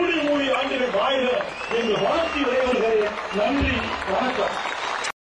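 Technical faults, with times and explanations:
0.53–0.56 s, 2.72–2.75 s and 5.04–5.08 s: damaged data in a compressed stream. Each brief chirp or blip, 24 to 38 ms long, comes from corrupted bytes that the decoder misreads until it regains frame sync. On a spectrogram, each appears as a narrow vertical smear of broadband energy, and on the waveform as a short jagged discontinuity.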